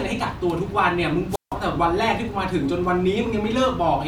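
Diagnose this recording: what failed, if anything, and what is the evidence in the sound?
A wireless microphone squelch dropout occurs in the analogue radio link from 1.30 to 1.55 s: hiss rises, then about 160 ms of near silence as the receiver mutes the fading signal.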